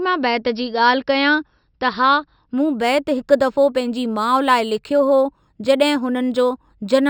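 From 2.58 s to the end, imaging from linear upsampling: the top is dulled, and a mirrored copy of the spectrum sits at 6–12 kHz, about 30 dB down, fitting a 12-to-48 kHz straight-line rate change. Unlike plain band-limiting, sibilants carry a faint metallic shimmer.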